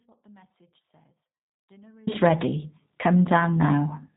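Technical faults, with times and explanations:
0.00 to 2.07 s: audio dropout to a faint residue. The clip opens with the speech already lost. Only a faint trace remains, roughly 40 dB below normal level. At 2.07 s the speech returns abruptly. The likely cause is a broken signal feed while the path stayed live.
Throughout: G.729 codec. Nothing above 3.8 kHz is heard, giving a narrow telephone band. The speech is rebuilt from a vocal tract filter and sparse pulses, so it sounds plainly rough and synthetic. That fits an 8 kbit/s G.729A coder.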